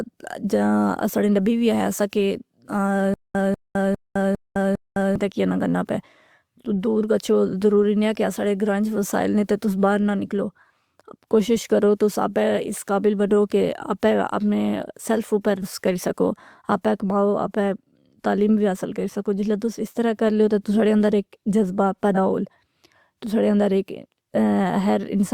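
From 3.14 to 5.16 s there is a stutter with silent gaps. A burst of about 194 ms repeats five times, each followed by about 210 ms of dead silence, giving a steady 403 ms cycle. The likely cause is a stalled stream replaying its last fragment and then running empty. The waveform shows identical blocks separated by flat silent stretches.

Compressed frames are skipped at 15.62–15.64 s and again at 22.14–22.17 s. The frame length is 42.7 ms. Roughly two frames, about 100 ms of audio, vanish at the first point, and about one frame, around 40 ms, at the second. Each time the audio jumps forward past the missing material.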